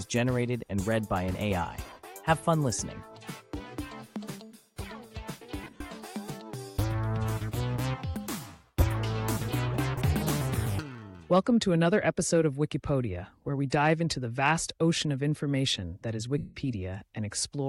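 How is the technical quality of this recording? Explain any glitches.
The recording is marred by four dropouts from lost LE Audio frames, at 1.84–1.98 s, 5.64–5.81 s, 8.80 s and 16.38–16.56 s. Missing Bluetooth packets force the LC3 decoder to conceal them by reusing the last spectrum with randomised signs and then fading it out. Tones become a brief noisy smear, and the 180 ms gap at 16.38 s sinks gradually toward silence.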